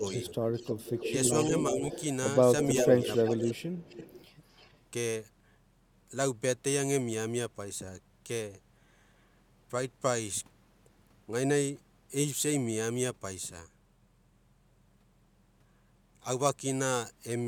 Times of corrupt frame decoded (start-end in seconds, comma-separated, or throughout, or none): none